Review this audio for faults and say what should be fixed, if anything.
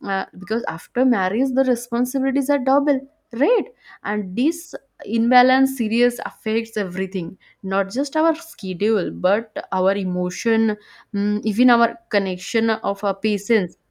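No faults turn up in this audio, so nothing needs to be fixed.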